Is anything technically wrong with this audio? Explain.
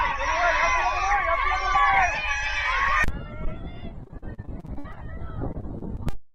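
Yes. Repeated packet loss (robotic sound) occurs from 4.03 to 4.98 s and again from 5.52 to 6.15 s. Audio is repeatedly lost in transit, and each hole, up to 58 ms in the first stretch and 37 ms in the second, is patched by extending the preceding sound. The patches cover about a third of the first stretch and a fifth of the second, giving a choppy stutter with pieces missing. A single packet loss would leave one isolated blip rather than this rapid, clustered chain.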